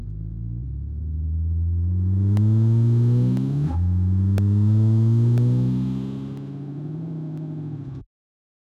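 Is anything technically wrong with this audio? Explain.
Yes, periodic USB or driver dropouts: from 2.37 to 8.38 s, something blocks the driver every 1.0 s, leaving roughly millisecond silent gaps, heard as regular ticks.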